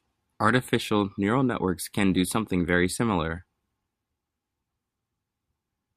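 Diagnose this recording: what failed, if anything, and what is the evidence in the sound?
Nothing in the recording points to a failure at any stage between capture and playback. The speech comes through intact, with no audible event that would call for a diagnosis.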